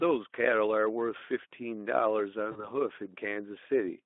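At 2.51 s the speech breaks up with VoIP packet loss concealed by the speech codec. About 40 ms of audio went missing, which fits two lost 20 ms frames. The Speex decoder filled the gap by repeating its last pitch and filter shape at falling gain. That sounds like a brief buzzy or noisy smear that fades. Because each frame builds on the one before, the voice stays weak or distorted until about 2.69 s.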